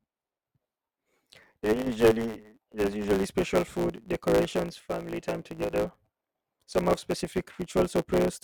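Speech runs through a block size mismatch (truncated) for its whole length: a steady buzz at 109 Hz and delivery about 1.09 times too fast, yet the pitch stays about normal. That combination points to one stage handing over longer blocks than the next reads, with each block's tail discarded. A plain speed-up would raise the pitch too, and mains hum would not change the pace. Two brief level dips follow, from 1.82 to 1.87 s and from 5.64 to 5.71 s, the second just after "food decorations family time". In each, the sound falls abruptly by about 6 dB and then recovers, most likely because one channel drops out before the mono sum, so the shared content loses half its amplitude. A gain glitch or fade would ramp or land on an arbitrary amount, not snap down by this exact step and snap back.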